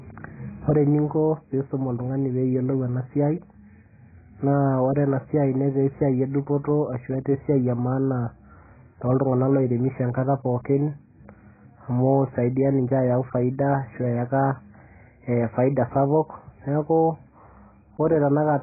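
Heavy AAC compression, likely at a very low bitrate around 12 kbps, runs through the whole clip. Starved of bits, the encoder drops everything above about 2.5 kHz and quantises the remaining frequency lines coarsely. The speech sounds dull and muffled, with no crispness on consonants. Sibilants and sustained vowels take on a warbling, smeared texture where the spectrum has been thinned or patched.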